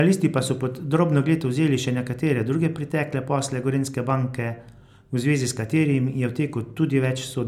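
No technical faults can be heard anywhere in the recording.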